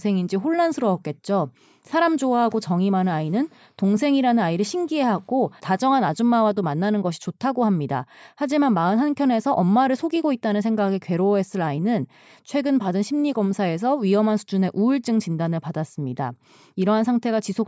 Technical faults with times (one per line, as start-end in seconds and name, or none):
none